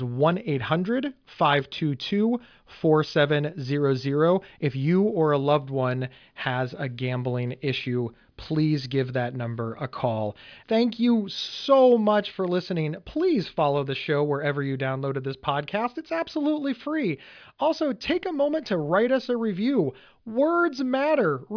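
No technical faults can be heard anywhere in this speech.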